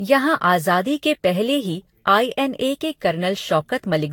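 Speech with generation loss throughout. It sounds swirly, hollow and smeared, with blurred attacks. The likely cause is around seven lossy re-encodes near 72 kbit/s.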